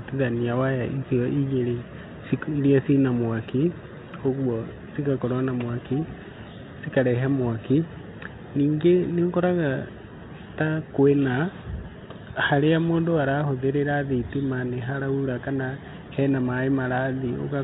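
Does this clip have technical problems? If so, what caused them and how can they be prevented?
No, the speech arrives over a G.726 ADPCM link at 32 kbit/s that is working as designed, and nothing heard here amounts to a technical problem.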